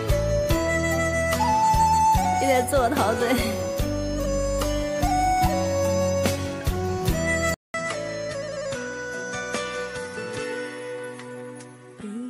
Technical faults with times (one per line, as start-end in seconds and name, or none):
7.54-12.29 input switched to a poorer device